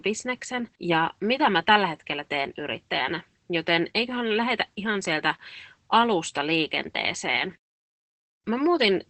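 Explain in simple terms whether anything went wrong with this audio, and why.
Opus voice compression affects the speech for the whole clip. The codec squeezes the voice hard, so it sounds muffled, hoarse and slightly robotic, with nothing above about 8.4 kHz. Plain filtering would only dull the sound; this adds the gritty, synthetic texture.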